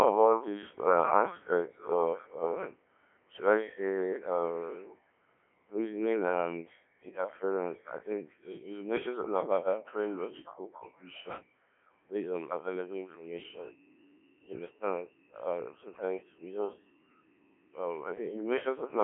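Speech passed through the Codec 2 vocoder runs the whole way through, sounding robotic and buzzy because the decoder rebuilds each voice from sine waves using only pitch, voicing, energy and a coarse spectral envelope. The damage is heavy, which fits a very low rate near 1.3 kbit/s. A spectrogram shows a narrow 300 Hz to 3.4 kHz band with nothing above 3.8 kHz. The waveform no longer matches the original's shape.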